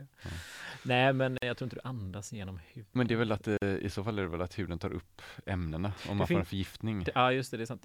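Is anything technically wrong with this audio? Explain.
Yes. The speech has two gaps at a join of encoded pieces: one from 1.38 to 1.42 s, just before "jag tror inte du", and one from 3.57 to 3.62 s, just after "är väl att eh". Each lasts about 46 ms. Separately encoded segments were spliced without removing the encoder's leading delay and last-frame padding, so a brief silence cuts into continuous speech and the sound resumes where it stopped. On a waveform each is a flat stretch with smeared edges. On a spectrogram it is a narrow vertical blank band across all frequencies.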